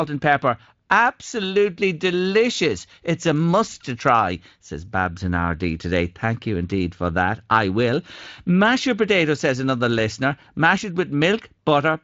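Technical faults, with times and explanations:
No technical faults are heard in the clip, so there are no times or explanations to give.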